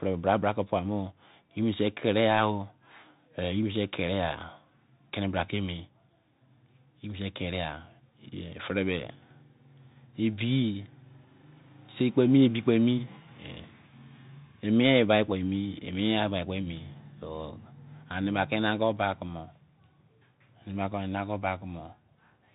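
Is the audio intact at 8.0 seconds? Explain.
No. At 8.0 seconds, as across the whole clip, the speech runs through a Bluetooth CVSD headset codec, which codes each sample as a single up-or-down bit with an adapting step. Nothing above 3.8 kHz passes, and s sounds turn scratchy over a granular hiss.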